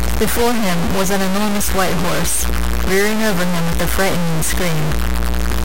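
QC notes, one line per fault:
Throughout, low bit depth without dither: the speech has heavy grain that moves with every syllable, the distortion about as loud as the speech itself, and quiet tails sputter or drop to silence. It's likely truncation to something like 3 bits with no dither.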